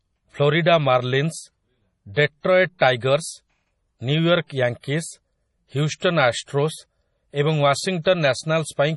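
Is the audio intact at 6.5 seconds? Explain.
No. From 6.42 to 6.48 s, just before 6.5 s, a short hiss runs for about 59 ms ahead of a sharp onset, which then lands soft and smeared. This is pre-echo: the codec spread quantisation noise sized for the loud attack across its whole transform block, filling the quiet gap before it.

Underneath that, the speech sounds watery and swirly, with nothing above 11.4 kHz. This is heavy MP3 compression, likely at a bitrate around 32 kbps. Starved of bits, the encoder cuts the treble at a fixed point and zeroes weaker frequency lines that flicker between frames.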